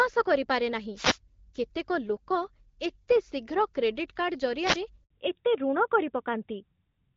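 Wireless microphone noise hits occur at 0.94 to 1.18 s and again at 4.60 to 4.79 s. Each time, the FM radio link from the microphone fades as reflected copies of the signal partly cancel the direct one, so the receiver's own noise rises toward the level of the speech. That surge is heard as a brief swish of static, roughly a fifth to a quarter of a second long, washing over the voice.

A handover gap follows at 5.04 to 5.10 s. The call was being passed from one network to another, and no speech frames arrived while the link switched over. The voice dies away almost at once and leaves 60 ms of silence before the new connection picks up. Whatever was said in that slice is gone, so the speech has a small hole in it rather than a click or a smear.

Fallback to narrowband starts at 5.10 s, right after the gap, and lasts to the end of the clip. Before the switch, the call ran on the AMR wideband (HD Voice) codec at 12.65 kbit/s, with light coding damage and sibilants reaching above 4 kHz. 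Afterwards, the call comes through an older narrowband codec, and nothing above 4 kHz survives. The voice becomes duller and more boxed-in, and the s and f sounds lose their edge.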